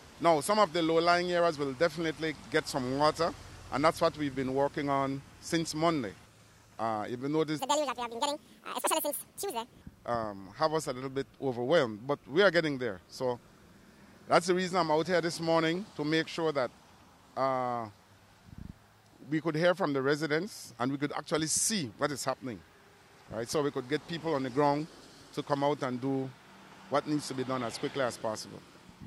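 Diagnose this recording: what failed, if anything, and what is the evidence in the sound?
A section at the wrong speed runs from 7.59 to 9.82 s. The sound plays twice as fast and jumps roughly ten semitones higher. This likely comes from a playback clock mismatch.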